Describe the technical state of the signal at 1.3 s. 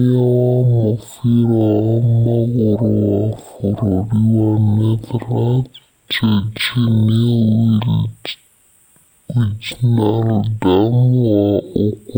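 At 1.3 s the speech shows a stereo read as mono fault, present throughout the clip. Interleaved left and right samples are taken as consecutive samples of one channel, so playback runs at half speed and the speech sits a full octave, 12 semitones, low.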